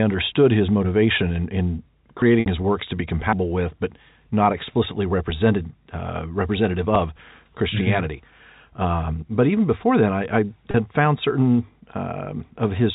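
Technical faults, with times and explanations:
2.22 s, 3.33 s, 6.96 s, dropped buffer (overrun): jumps where the speech skips ahead, roughly 40 ms lost at 2.22 and 6.96 s and about 150 ms at 3.33 s, likely from uncollected buffers being overwritten.
2.40–2.46 s, 10.71–10.74 s, packet loss with pitch repetition: 60 ms and then 30 ms of lost audio is bridged by repeating the last pitch period, fading into silence before the speech cross-fades back in the first gap and a brief held, buzzy tone in the second.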